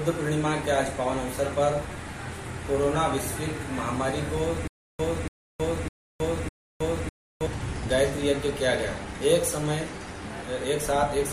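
From 4.68 to 7.47 s, one 285 ms fragment repeats four times with 319 ms silences between: stutter with silent gaps, likely a stalled stream.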